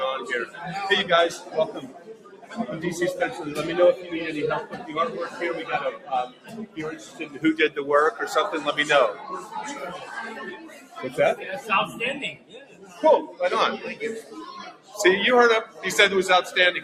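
A noise suppressor applied to music or sounds runs through the whole clip. The processor is built to separate speech from background, so it treats sustained, steady material as noise and pulls it down while letting sharp onsets pass. The gain it applies keeps shifting, with swings on the order of 15 dB, so the audio pumps and thins from moment to moment rather than holding a stable level.

Sound cut by the noise suppressor shows up as distinct dips at 1.38–1.54 s, 1.75–2.57 s, 4.71–4.87 s, 6.28–6.77 s, 6.97–7.39 s, 10.56–10.97 s, 12.34–13.02 s and 14.71–14.94 s. In each, the suppressor misjudges held or decaying sound as noise and clamps it, by about 7 to 12 dB. The deepest cuts, around 12 dB, fall at 1.75 s and 12.34 s.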